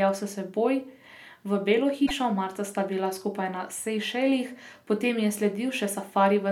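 A speech recording with one fault between 2.05 and 2.11 s: a short glitch, about two 26.1 ms frames long, where the sound lurches forward. The likely cause is a broken MP3 bit reservoir: frames went missing, so the next frames reached back for borrowed data and decoded bytes from the wrong frame. On a spectrogram it shows as a brief disrupted patch; the waveform shows an abrupt discontinuity.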